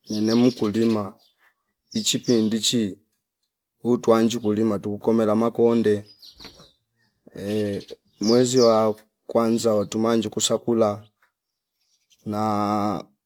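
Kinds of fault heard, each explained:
No technical faults are audible.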